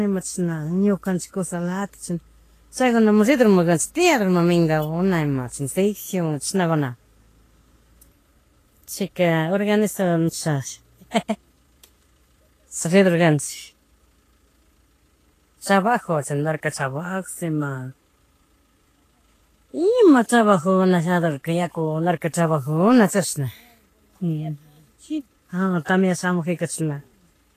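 Throughout, the speech sounds hissy and grainy, cut off at 14.2 kHz; likely Vorbis compression, fitting roughly 33 kbps, has quantised the treble into noise.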